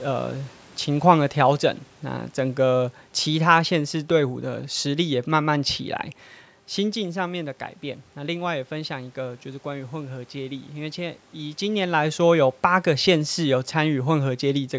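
No technical faults are present.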